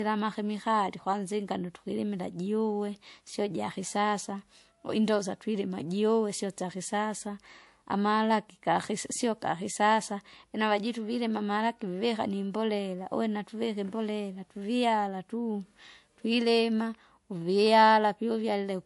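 From start to finish the speech carries a layered, smeary coding texture, and nothing gets through above about 11.3 kHz. This is most likely transcoding between lossy codecs: a fairly low-rate first encode, something like 48 kbit/s MP3, then re-encoded by a second codec, plausibly WMA at around 96 kbit/s. The second pass wastes bits re-coding the first pass's swirl while adding its own, so you hear both sets of artefacts together, and the earlier bandwidth ceiling stays put.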